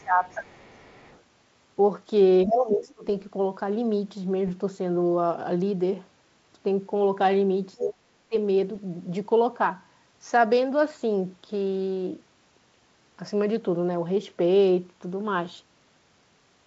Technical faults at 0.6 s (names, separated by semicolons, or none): speech suppressed in double talk; other side's voice leaking through